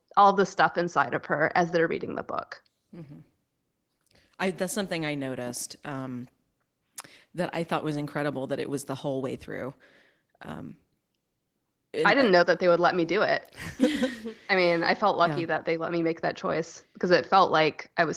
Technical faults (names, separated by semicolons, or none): none